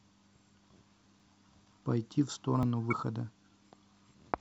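At 1.2 s and again at 2.63 s the speech jumps forward with no gap, losing roughly 10 ms and then about 20 ms. This is likely a dropped buffer (overrun), where samples were overwritten before being read and the surrounding audio was spliced together.

From 2.88 to 2.93 s there is a brief disruption in the speech. This is damaged data in a compressed stream: the decoder misreads the corrupted frames, loses sync, and resumes at the next valid frame header.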